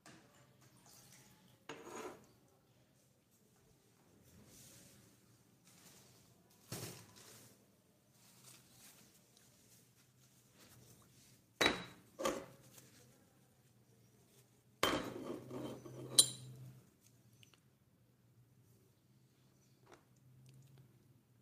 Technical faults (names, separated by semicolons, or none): doubled audio track